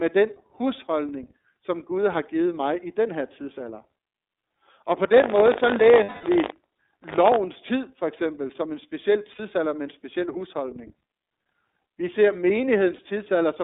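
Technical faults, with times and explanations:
Throughout, iLBC codec: the speech is squeezed into a 300 Hz to 3.7 kHz line band, with nothing above 4 kHz, and coded in 30 ms frames at 13.33 kbps. Each frame's excitation is coded independently, leaving plainly audible roughness and a synthetic edge on the speech.
5.12 to 7.37 s, buffer tearing: just before "tid for eksempel som", a steady 50 Hz rattle rides on the speech. The write and read positions of the ring buffer cross every period, so a small slice, around a twentieth, carries audio from roughly 70 ms earlier. Hard joins at the buffer rate produce the buzz.
6.03 to 6.24 s, 9.33 to 9.40 s and 12.96 to 12.99 s, lost iLBC frames: gaps of 210 ms, 60 ms and 30 ms, the second between "eksempel som en speciel" and "med en speciel husholdning". The decoder repeats the last pitch cycle mixed with noise, giving a held, buzzy or breathy vowel that fades over the longest gap. 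The voice comes right again almost immediately because frames stand alone.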